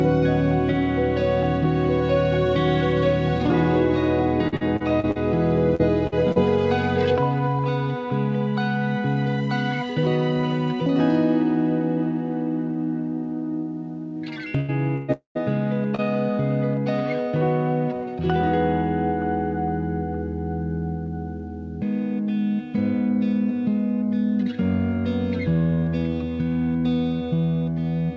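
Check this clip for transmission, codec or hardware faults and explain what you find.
Yes, there are several transmission faults, all from packets that arrived late or not at all. They cluster in two places: early in the clip, and in a dense run between about 14.6 and 16.0 s. The audio is band-limited, with nothing above 8 kHz, which fits a wideband call codec such as G.722.

Repeated packet loss (robotic sound), 4.48 to 6.39 s. Over this stretch the stream lost packets eight times. The longest hole lasted 46 ms, and about a sixth of the span, roughly 320 ms in all, had to be patched. Each time, the receiver extended the preceding sound to cover the gap, and then the next gap arrived. What you hear is choppy, mechanical-sounding audio with small pieces missing.

Burst of packet loss, 14.60 to 14.71 s and 14.96 to 15.11 s. Two runs of consecutive packets failed to arrive in time. The first left about 80 ms missing and the second about 120 ms. 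In each case the receiver kept the last sound going and faded it as the gap lengthened. That gives a short held buzz or dying hiss, and then the audio jumps ahead with the middle gone.

Long network dropout, 15.12 to 15.38 s. Almost directly after the second burst, about 240 ms of audio goes missing. The first part is covered by a decaying extension of the last sound. The final 120 ms or so is plain silence before the audio returns further along. This is likely a network interruption long enough that concealment gave up and muted.

Short concealed packet loss, 15.95 to 16.01 s. Roughly 40 ms failed to reach the decoder in time. The gap was filled by continuing the previous sound, using its pitch if it was tonal or shaped noise if it was not, and the fill was then cross-faded back into the real signal. The result is a brief smear or wobble, and a very short sound at that point could disappear entirely.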